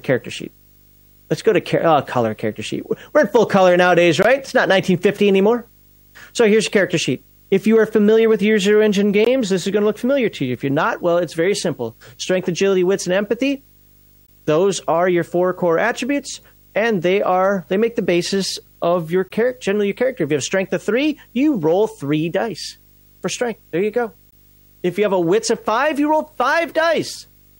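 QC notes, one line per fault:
Throughout: video or display buzz. A screen or video cable couples into the audio path, adding a 50 Hz field-rate buzz with hash above it and a 15.6 kHz line tone, roughly 35 dB under the speech.
4.23, 9.25, 14.27, 19.29, 24.31 s: gap between chunks. Audio arrives in 5 s chunks, leaving 20 ms holes that break the speech without losing any.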